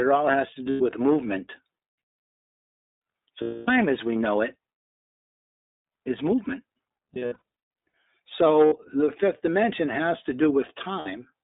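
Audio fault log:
throughout, iLBC codec: The speech runs through a narrowband iLBC coder at a rate that fits its 15.2 kbps mode, coding each 20 ms frame alone. The line passes only about 250 Hz to 3.7 kHz, and plainly audible roughness gives a synthetic edge.
0.70–0.82 s, 3.42–3.70 s, 7.14–7.42 s, 8.66–8.74 s, 11.00–11.08 s, lost iLBC frames: Packets went missing, dropping 100, 260, 60 and 60 ms of audio, with about 480 ms scattered in short bursts around 7.1 s. The decoder repeats the last pitch cycle with added noise, so each gap is a held, buzzy vowel that clears almost at once.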